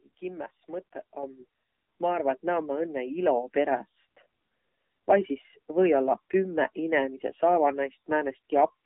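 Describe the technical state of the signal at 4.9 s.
At 4.9 s, as throughout, speech passes an AMR narrowband mobile codec, which fits its 7.4 kbps mode, confining it to 150 Hz–3.7 kHz with plainly buzzy, synthetic coding damage.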